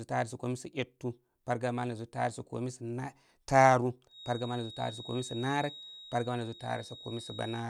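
A feedback whistle runs from 4.06 s to the end at 7.69 s in this speech clip: a thin 3.8 kHz tone well below the speech, likely from a loudspeaker-microphone loop held just short of runaway.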